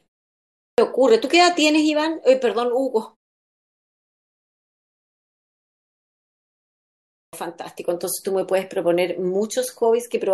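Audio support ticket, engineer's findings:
Speech onsets chopped at 0.37 s and 6.96 s, first ~410 ms and ~370 ms lost. Clipped start after a pause: output device sleeping through silence, slow to wake and relock.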